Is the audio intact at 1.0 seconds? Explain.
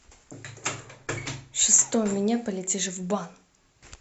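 Yes, at 1.0 seconds the speech runs on cleanly, with no dropout, click, distortion or other fault to be heard at that moment.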